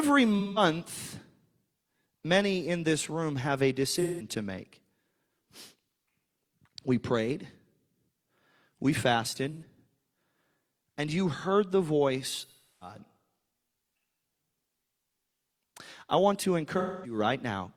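Speech with AAC frame loss with concealment at 0.39, 3.95 (after "this room have a"), 9.52 (after "we fasted"), 12.40 and 16.78 s (after "I want to"). The decoder patches gaps from the last good spectrum: short ones sound smeared and phasey, while the 341 ms gap decays and fades back.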